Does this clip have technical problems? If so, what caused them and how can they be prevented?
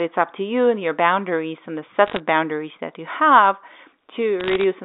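Yes. Bit errors on a digital phone line cause brief bursts of crackle from 2.06 to 2.20 s, between "your boundaries and the" and "boundaries that you have", and again from 4.40 to 4.64 s. Flipped bits, around half a percent, each corrupt one logarithmic G.711 sample, heard as sharp ticks over the narrow telephone-band sound. A waveform shows isolated single-sample spikes, and a spectrogram shows thin vertical lines spanning the band. Error-protected transport or cleaner line conditions prevent this.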